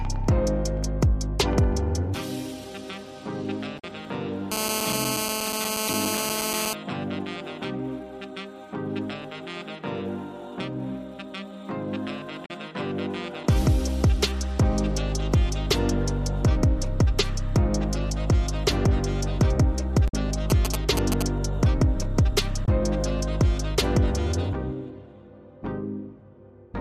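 At 3.76 to 3.85 s there is a brief glitch from damaged data in a compressed stream. Part of the encoded data is corrupt, so the decoder misreads those frames, loses sync and hunts for the next valid frame header, producing a short blip. The same fault recurs at 5.85 to 5.90 s, 12.42 to 12.51 s, 20.05 to 20.14 s and 22.62 to 22.68 s, each a burst of a few tens of milliseconds.

From 4.52 to 6.73 s a hard, raspy GSM phone buzz sits over the audio at about 2 dB below the signal, so it is nearly as loud as the program itself. A 2G handset nearby is in an active call, transmitting radio bursts at 216.7 Hz. The audio circuitry rectifies those pulses into a steady buzz with a dense harmonic series that has no relation to the wanted sound. The corrupted-data blip at 5.85 s falls inside this stretch.

From 20.50 to 21.23 s there are GSM signalling bursts. These are a galloping dit-dit-dit of short buzzes at roughly the level of the signal itself. 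Here the nearby phone is not in a call but is sending short groups of bursts to the network, still at 216.7 Hz. The rectified pulses come through as intermittent clusters rather than a continuous tone.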